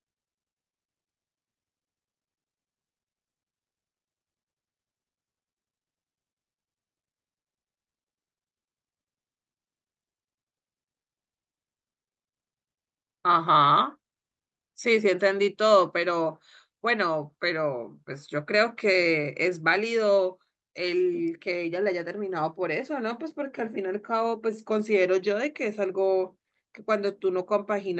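No technical faults detected.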